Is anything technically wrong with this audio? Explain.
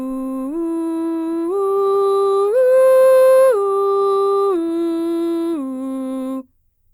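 No, nothing is technically wrong with this audio.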